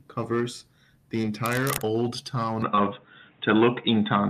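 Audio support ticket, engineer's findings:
Short concealed packet loss at 1.21–1.25 s, just after "covers the", and again at 2.75–2.79 s. Brief smear in the speech. About 20 ms missing each time, bridged by the receiver extending the preceding sound, then blending back into real audio.

Cable scratch noise, 1.46–1.82 s, also following "covers the". Dense, uneven scratching, nearly as loud as the speech. Likely a worn cable or connector being moved, contact resistance fluctuating rapidly.

Input switched to a poorer device at 2.62 s, persisting to the end. No gap at the changeover. Sound turns dull, nothing above 3.8 kHz. Level shifts by a few dB and a faint new noise floor appears. Likely a change to a narrower-band microphone or headset call profile.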